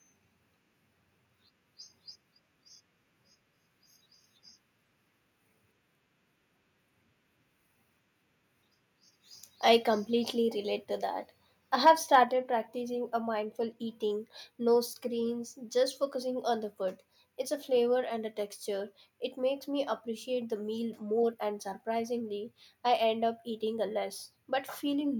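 From 11.86 to 12.16 s the loudest syllables take on a harsh, crackling edge: microphone overload, likely from input volume set so high that peaks pushed about 2 dB past the converter's ceiling and had their tops flattened. Only a small fraction of samples are cut, so it is brief grit rather than the steady fuzz of a saturated preamp.

At 12.24 s the speech and the background behind it drop together by about 4 dB in a single step, with no fade. This is the microphone volume stepped down, likely by call software reacting to the preceding clipped peaks.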